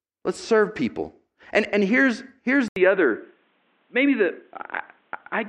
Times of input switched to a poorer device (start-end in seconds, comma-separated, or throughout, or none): 2.68-5.48